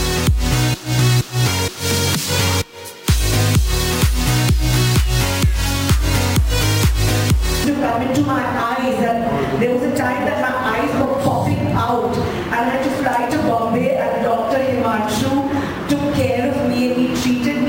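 Throughout, imaging from sample-and-hold upsampling adds a metallic fizz: repeating samples to go from 24 kHz to 44.1 kHz leaves mirrored copies at 12 to 24 kHz, about 20 dB down. Unlike steady hiss, it swells with the sound and moves opposite in pitch.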